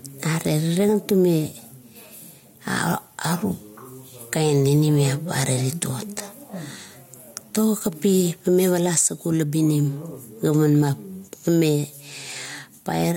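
Gain pumping runs through the whole recording. The gain drops under every louder syllable and recovers in the pauses between phrases, with a swing of around 5 dB. The likely cause is input gain set far too high for the microphone, with a fast compressor or limiter clamping down on each peak and releasing in the gaps. The speech sounds squashed, with loud and quiet passages pulled unnaturally close together.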